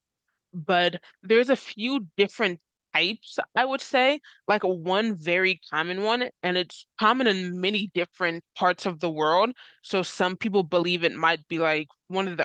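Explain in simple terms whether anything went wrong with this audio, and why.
Nothing went wrong here.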